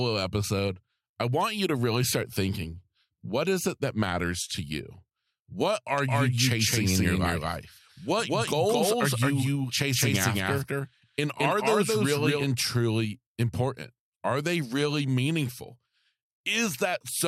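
From 5.98 to 12.44 s, just before "truly important", a doubled audio track trails the speech by about a fifth of a second, equally loud and dry, likely from a second capture path.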